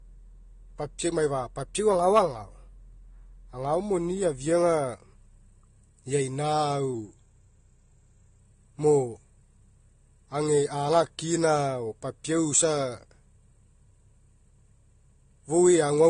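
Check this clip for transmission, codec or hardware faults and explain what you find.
Two faults are present: a stacked-codec sound through the whole recording and two short pitch-and-speed jumps in the speech.

Throughout, the speech has nothing above 9.7 kHz and carries two overlapping layers of smearing and swirly artefacts. This is likely transcoding between lossy codecs: a low-rate AAC-style encode re-encoded as Vorbis at a modest rate. On a spectrogram, a hard ceiling sits flat at 9.7 kHz, with blotchy, quantised texture beneath it.

From 1.75 to 2.78 s, the speech runs about 5.8% fast and sits roughly a semitone sharp (about 97 cents) before snapping back. From 6.94 to 8.39 s, it runs 5.8% slow and about a semitone flat (about 103 cents). The likely cause is a drift correction step, where clock-matching software abruptly changed the playback rate to rebalance its buffer. On a spectrogram, the harmonic lines shift up or down together and jump back at each boundary. 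The waveform looks compressed in time during the fast section and stretched during the slow one.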